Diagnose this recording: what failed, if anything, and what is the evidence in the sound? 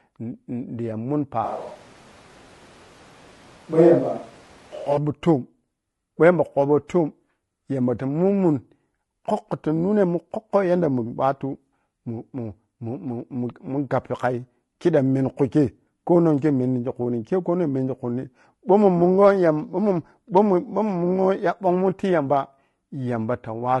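The whole clip sounds rough and grainy, with noise filling the gaps between pitch harmonics and a thin, synthetic top band. That's low-delay AAC compression at the codec stage, likely AAC-ELD, which fits about 32 kbps. Its short frames can't resolve harmonics cleanly.

From 1.45 to 4.97 s the speech abruptly turns roomy and hollow, loses bass, and picks up room noise roughly 30 dB under it, with loudness about unchanged. That's likely a switch to a distant microphone at capture, with the close mic dropping out, then snapping back.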